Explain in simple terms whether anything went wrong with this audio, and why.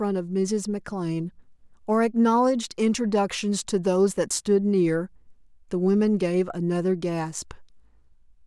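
Nothing went wrong here; the speech comes across steady and intact, with no glitches, dropouts or odd sounds anywhere along the way.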